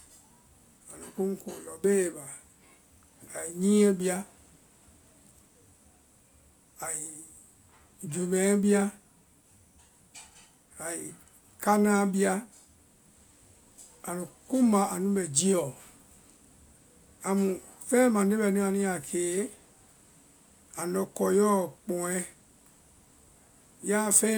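No technical faults are audible.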